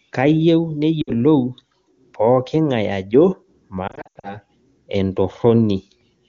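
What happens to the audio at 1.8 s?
Nothing goes wrong at 1.8 s: the speech carries straight through that moment intact, with the AMR wideband (HD Voice) coding leaving at most faint traces at its high rate.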